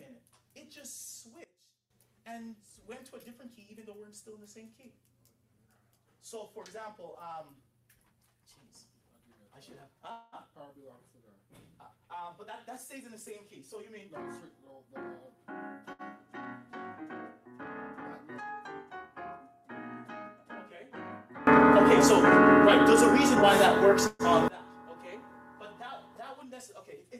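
At 1.44 s the level drops by about 18 dB in a single step, background and all, and stays down until 1.90 s. That's a sudden gain jump, likely a gain setting applied without any ramp. Around 21.47 s it happens again in the other direction, up by about 24 dB, holding until 24.48 s.

From 10.11 to 10.35 s there's a call audio freeze. The last sound gets drawn out into a fading buzz for roughly 208 ms, then carries on where it left off with nothing lost. The cause is likely packets stuck in transit and the jitter buffer running dry. A shorter freeze of about 126 ms shows up at 24.07 s, inside that loud stretch.

Between 13.97 and 14.95 s there's a jitter buffer speed-up. The receiver snips out tiny pitch-period chunks to shed backlog, about a tenth of a second in total, so the sound runs at roughly 111% with its pitch unchanged and feels rushed. A milder one at 106% runs from 23.35 to 23.89 s and trims a few tens of milliseconds.

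At 15.93 s there's a short stall from a late packet. One sound is held about 65 ms too long, with a faint buzz, until the missing packet turns up and playback resumes.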